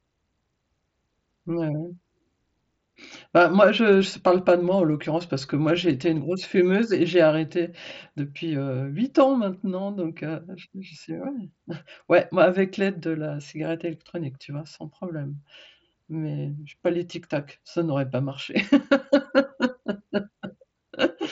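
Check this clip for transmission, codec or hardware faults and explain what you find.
Nothing is wrong with the signal: the speech comes through a Bluetooth mSBC headset link working as intended, with content stopping at about 7.7 kHz as that wideband codec allows and only the light graininess on louder moments that is normal for it.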